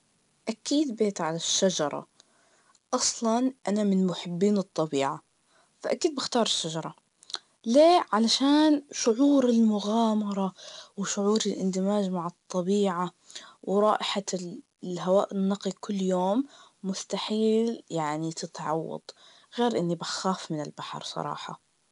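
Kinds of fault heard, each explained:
4-bit ADPCM compression: a gritty hiss that swells with each loud syllable and vanishes in pauses, unlike steady background hiss; nothing above 10.7 kHz dulls the speech.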